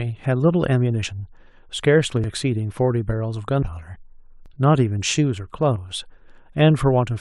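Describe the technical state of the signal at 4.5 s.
At 4.46 s the speech jumps abruptly, and roughly 20 ms of sound is simply missing. The two sides butt directly together, with no silent gap between them. That joined-up skip, rather than a brief hole of silence as in a dropout, points to a likely dropped buffer (overrun): the incoming samples were overwritten before the software read them, so that audio never reached the recording.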